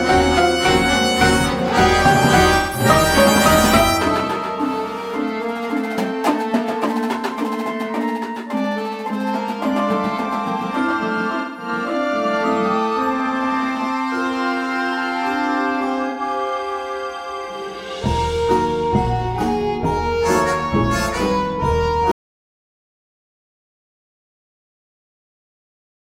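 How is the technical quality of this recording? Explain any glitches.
The recording has two kinds of fault: three short concealed gaps from AAC frame loss, and a dropout to silence that runs to the end.

AAC frame loss with concealment occurs at 2.57–2.85 s, 11.40–11.68 s and 16.09–16.21 s. The first two each lose about 170 ms of audio, which fits four lost frames. The third loses about 85 ms, consistent with two. The decoder bridges each gap by reusing the last good spectrum with randomised phase or smoothed energy, so these patches sound smeared, noisy or phasey rather than silent.

An audio dropout to silence begins at 22.11 s and lasts to the end of the clip. The sound stops mid-flow and is replaced by silence, with no room tone or noise floor left. This is likely from lost input, such as a disconnected device, a broken link or an unintended mute, while the recorder kept writing samples. 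Nothing after that point can be recovered.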